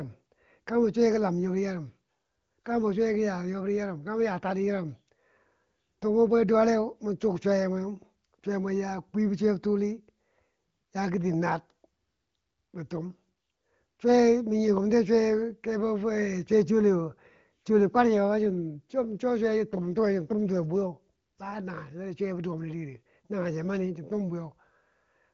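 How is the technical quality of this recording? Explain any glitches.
No glitches or faults are audible in this recording.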